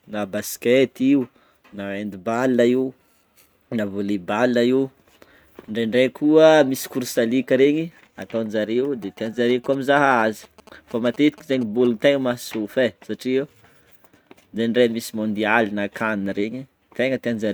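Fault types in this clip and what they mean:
GSM signalling bursts: a 2G phone close to the recording chain was exchanging short control transmissions with its network, and the audio circuitry rectified those radio pulses into the signal. Over the speech, from about 9.02 to 11.87 s, this comes through as a galloping run of brief buzzes at 216.7 Hz, the characteristic GSM frame rhythm, sitting roughly 20 dB below the speech level.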